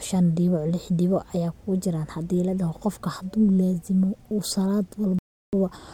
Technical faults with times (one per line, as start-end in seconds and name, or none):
5.19-5.54 Bluetooth stall